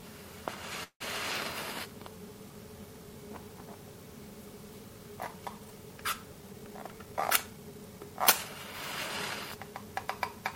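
Packets were likely held up in transit at 0.83 s, draining the jitter buffer and producing a call audio freeze until 1.02 s. With nothing new to play, the receiver stretched the last sound into a fading buzz or hiss that decays to silence for about 100 ms, filling roughly 170 ms in all. When the packets arrived, playback resumed exactly where it had paused, so nothing is lost, but everything after it runs 170 ms later.

From 6.42 to 7.79 s, the buffer was holding more audio than its target, and a jitter buffer speed-up trimmed it back. The receiver removed many short, pitch-period-sized slices in quick succession, taking out about 150 ms in total. Playback over that stretch runs at 112 % speed. The pitch stays put, but the sound seems hurried, as if pushed along before settling back to its normal pace.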